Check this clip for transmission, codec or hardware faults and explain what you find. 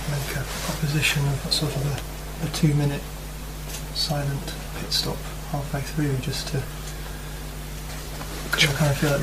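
One codec fault shows up three times: compressed frames skipped, at 4.65, 6.67 and 7.88 s. A few frames never get decoded, so the audio jumps ahead by about a tenth of a second at the first two and roughly half that at the last.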